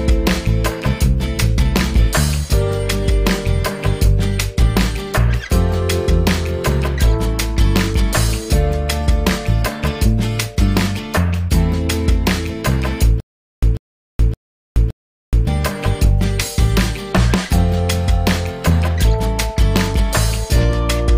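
From 13.2 s to 15.47 s there is a stutter with silent gaps: a 143 ms fragment repeats four times, each followed by about 424 ms of digital silence, every 568 ms. The likely cause is a stalled stream replaying its last buffer on each retry, losing the audio in between.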